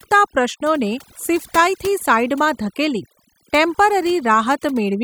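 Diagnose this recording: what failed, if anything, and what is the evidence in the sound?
Overdone noise removal at the call processing stage runs throughout: a near-silent background with twinkling specks. A spectrogram shows isolated flickering time-frequency dots and gaps punched into the harmonics.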